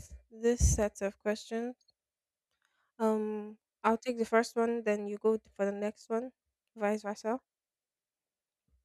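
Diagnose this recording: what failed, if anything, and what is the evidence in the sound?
Nothing stood out on listening to this speech recording; no stage of the chain gave any audible sign of failure.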